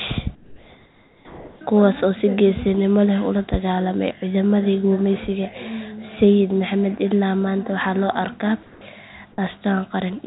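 Speech over a call line with nothing above 4 kHz, fitting a G.711 codec, where the background goes flat and featureless from 0.35 to 1.61 s (about 3 dB quieter) and 8.63 to 8.81 s (about 6 dB quieter), likely comfort noise in place of the background during transmission pauses.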